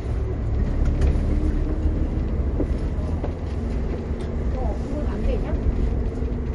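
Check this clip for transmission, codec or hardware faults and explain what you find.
One fault runs through the whole clip. The audio has a watery, swirling quality, and nothing is audible above 11.2 kHz, so the top end sounds dull. This is most likely MP3 compression at a low bitrate, around 48 kbps. With so few bits, the encoder cuts all treble at a fixed frequency and drops quiet frequency components that flicker on and off between frames. That flickering causes the swirl, and sharp onsets are also smeared.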